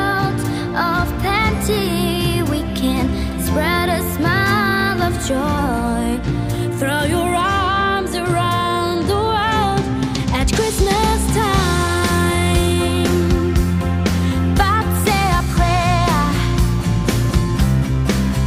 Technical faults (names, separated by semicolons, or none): none